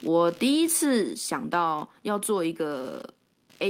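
Computer activity noise runs under the speech for the whole clip, a buzzing texture pulsing at around 70 times a second and sitting roughly 30 dB below the speech. Changing load in the computer's processor, graphics or mouse circuitry shifts the ground that the audio input shares, so the interference follows the machine's activity rather than the talker. It stays present through pauses.

A microphone volume step-down occurs at 1.02 s. Speech and background both fall by about 4 dB in a single abrupt move rather than a gradual fade, and the lower level holds from there onward. The likely cause is call software judging the microphone input too hot and cutting the device's input gain in one step, so everything captured after that instant arrives quieter.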